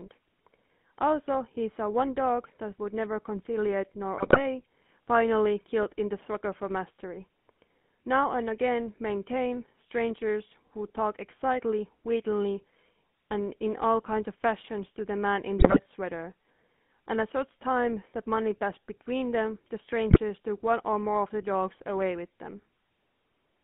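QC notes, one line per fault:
Throughout: GSM full-rate codec. The sound has a buzzy, gravelly roughness that fits the 13 kbps full-rate coder. It rebuilds the voice from a vocal-tract filter fed by a sparse, regularly spaced pulse excitation, so the fine texture between pulses is lost and replaced with a coarse rasp. The line band runs from about 150 Hz to 3.5 kHz, which thins the low end and strips the top.
4.17–4.41 s, 15.58–15.80 s, 20.10–20.19 s: GSM bit errors. Each burst breaks the decoded voice into squawks, pops and gargling. The first two last roughly a quarter second and the third under a tenth. Corrupted bits land in the filter, pitch and gain parameters, so successive 20 ms frames come out with warped spectra and sudden level jumps. This fits error rates of around 4 to 6 percent on a weak radio link.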